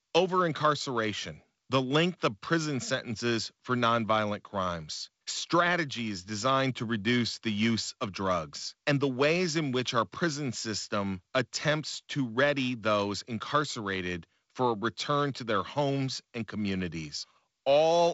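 A speech recording carried over G.722 wideband telephone coding, with nothing technically wrong to report at any point.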